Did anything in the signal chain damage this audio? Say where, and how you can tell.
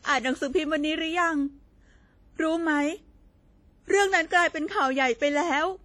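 Yes, at the codec stage. The speech rings and washes throughout with a hiss that breathes along with it, likely WMA compression. Damage this heavy fits a low bitrate around 32 kbps.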